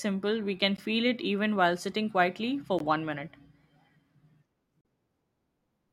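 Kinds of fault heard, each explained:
Gap between stream segments: segment timestamps leave holes the player fills with silence. Hard-edged dropouts of 15, 17 and 39 ms recur every 2 seconds.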